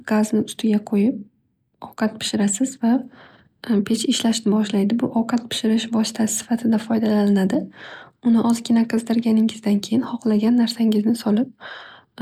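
No technical fault can be heard anywhere in the recording. There is nothing here that needs a timestamp or a fix.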